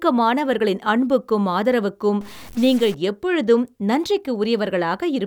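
After "அன்புக்கும் ஆதரவுக்கும்", from 2.21 to 2.94 s, harsh buzzy distortion appears, likely a stuck bit. Unlike clipping, it also fills quiet gaps with noise at about -35 dBFS.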